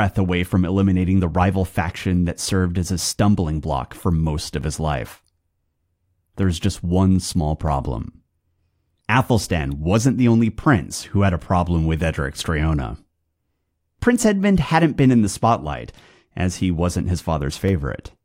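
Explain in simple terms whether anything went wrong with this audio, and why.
Dropped samples cause four sharp clicks: at 1.88 s, after "from eliminating the rival", and at 6.43 s, 7.68 s and 17.69 s. At each click, likely a fraction of a millisecond of audio went missing, so the sound jumps abruptly.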